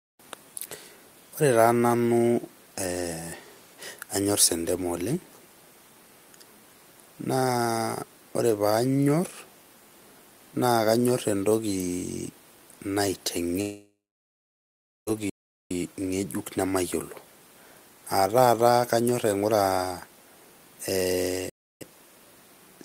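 In this speech recording, the sound breaks up at 13.61 s. The last sound is drawn out into a fading buzz, then there is about 1.12 s of near-silence before the audio returns at 15.09 s, about 1.46 s of material simply gone. This is a long network dropout, most likely caused by packets failing to arrive for that whole stretch: the receiver's concealment stretched the final fragment until it ran out, and the stream resumed further on without the lost portion. Shortly after, from 15.30 to 15.71 s, the audio cuts to dead silence mid-flow for about 0.41 s and then resumes with "ngejuk nemayiolo". That is a playback stall: output halts rather than fading, which points to the player likely being starved of data or blocked, going quiet until it caught up. A second playback stall of the same kind occurs from 21.50 to 21.81 s, a flat gap of about 0.31 s in which the sound stops abruptly and then carries on. 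At 18.61 s there is a single sharp click, a thin vertical line on a spectrogram, with no audible gap around it. That is dropped samples: a fraction of a millisecond of the waveform is missing, so the signal jumps straight to a later value. The cause is likely a buffer slip that discarded a few samples, which is far too short to remove any sound but leaves the step as a click.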